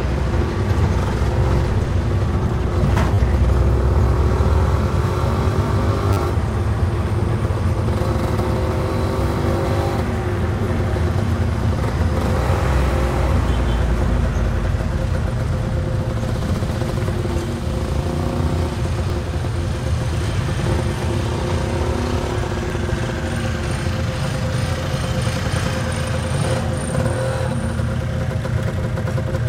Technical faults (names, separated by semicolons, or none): repeated buffer